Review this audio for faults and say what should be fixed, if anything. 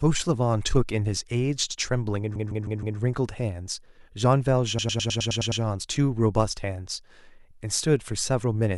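The speech stutters twice, from 2.35 to 2.98 s and from 4.78 to 5.62 s. The first time, a 156.7 ms slice plays four extra times. The second time, a 104.5 ms slice plays eight extra times. These are repeated frames: a run of compressed frames was written or delivered more than once, and the decoder played each copy. The block lengths fit runs of roughly six and four frames, and the repeats add about 0.63 s and 0.84 s to the audio. To prevent it, deduplicate frames by sequence number or timestamp before they reach the decoder.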